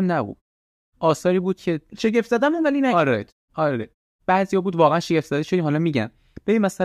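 No technical faults can be heard in this recording.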